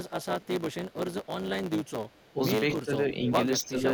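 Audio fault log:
throughout block size mismatch (truncated): a steady 109 Hz buzz at the block rate, with the speech running 1.09 times fast at normal pitch, unlike resampling, which would shift pitch.
0.03–0.97 s, 1.23–1.28 s, 1.84–2.33 s echo leak: a faint copy of the speech trails by 258 ms, about 25 dB down in the first stretch and weaker later. It is likely a far-end canceller letting loudspeaker sound through, and the fixed delay sets it apart from room reverb.
2.33–2.39 s, 2.82–2.91 s, 3.65–3.84 s speech suppressed in double talk: the speech dips by roughly 10 to 15 dB in short pieces, likely because the canceller ducked during overlapping talk. These are level dips, not the full silences of dropouts.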